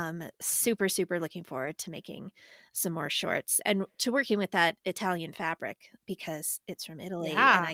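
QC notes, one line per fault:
1.65–1.67 s and 4.01–4.03 s, lost packet rebuilt from error correction: a single packet went missing each time, and the decoder played the reduced-bitrate copy carried in the following packet. There is no gap, but 20 ms after "super super looking" and after "some more shorts and" sounds briefly rougher and noisier.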